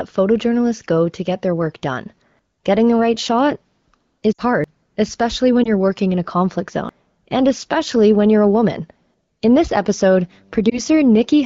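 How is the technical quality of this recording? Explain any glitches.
The recording has two kinds of glitch: brief dropouts from lost AMR speech frames, and abrupt skips where audio is missing between chunks. The underlying AMR wideband (HD Voice) coding is light, consistent with one of the higher AMR-WB modes.

Lost AMR speech frames occur at 4.33–4.41 s, just before "you're working in a" at 5.63–5.69 s, and at 10.70–10.80 s. When a frame fails its check, the decoder fills in using the last good pitch and vocal-tract settings at reduced gain. The first event, about 60 ms long, sounds smeared and fading. The later single-frame losses are quick warbles. On a spectrogram, the harmonics freeze into flat, dimming bands. The waveform sags in level before recovering.

Audio missing between chunks falls at 4.64 s and at 6.89 s, between "working in a conflict" and "and especially when you're". 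The chunks are 2.5 s long, so the likely cause is segment-based capture dropping roughly a third of a second at each handover. The edges are butted together with no silence, so the sound jumps forward abruptly. The waveform shows a sudden discontinuity, and the spectrogram shows a hard vertical seam where the formant patterns don't line up.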